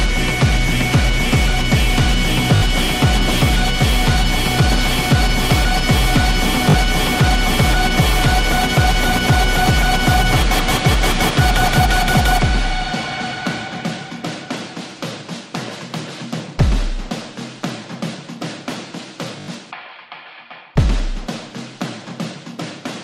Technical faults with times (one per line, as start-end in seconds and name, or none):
2.56-2.62 repeated buffer
6.70-6.74 repeated buffer
19.40-19.48 repeated buffer